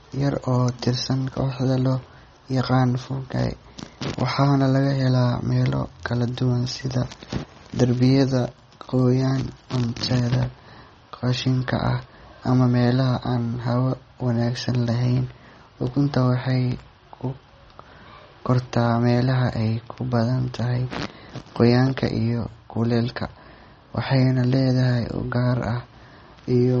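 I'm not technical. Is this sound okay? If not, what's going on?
No. MP3 compression damage runs through the whole speech clip, from start to finish, and it is plainly audible. It is likely caused by saving the sound as a small MP3 file. To shrink the file, the encoder throws away quieter details it guesses you won't notice, and those details flicker in and out, giving a watery, swirly quality. It also cuts off everything above 8.3 kHz, so the crisp top end of the sound is missing.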